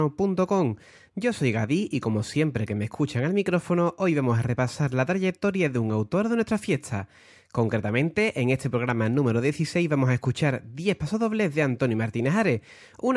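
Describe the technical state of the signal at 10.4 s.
At 10.4 s the speech signal is intact, with no audible fault at that moment.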